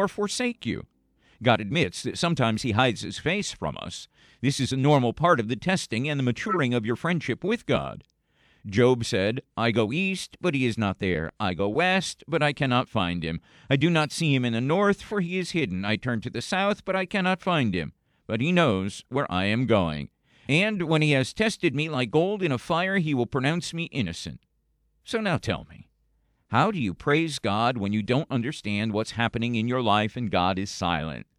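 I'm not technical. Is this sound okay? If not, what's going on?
No. There are five brief glitches, each a corrupt frame decoded. Small chunks of the compressed sound were damaged, but the player still played them. Each gives a quick chirp or blip, under a tenth of a second, at 6.48, 14.02, 15.08, 19.92 and 27.11 seconds.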